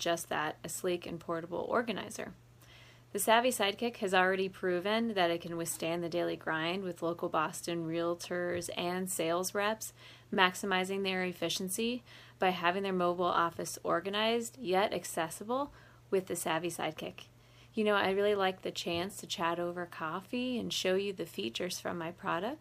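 At 10.33 to 10.36 s a brief stutter replays 26.1 ms of sound. This comes from repeated frames, which points to a single compressed frame being decoded twice.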